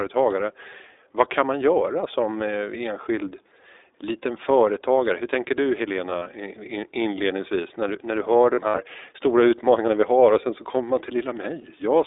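The whole clip carries iLBC codec damage, and it is plainly audible. The band is held to a phone line, from 300 Hz up to about 3.7 kHz. Nothing above that gets through. The speech sounds slightly rough and synthetic. That fits iLBC's higher-rate mode, around 15.2 kbps with 20 ms frames. Each frame's excitation is coded on its own, so the texture stays grainy but stable.

Lost iLBC frames come next, at three points. From 6.10 to 6.27 s, about 80 ms goes missing, scattered over 160 ms. The longest gap is around 40 ms. From 8.54 to 8.79 s, about 120 ms is lost across 240 ms, with one run near 70 ms. At 11.62 s there is a single 20 ms dropout. In each gap the decoder repeats the last pitch cycle mixed with noise. It sounds like a brief held, buzzy vowel. The voice is right again almost at once.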